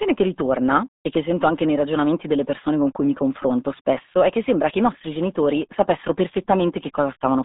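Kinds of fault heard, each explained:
RealAudio 14.4 codec, throughout: a dial-up-era speech coder, consistent with 8 kbit/s, passes only 200 Hz–3.7 kHz, leaving speech heavily muffled and gargly.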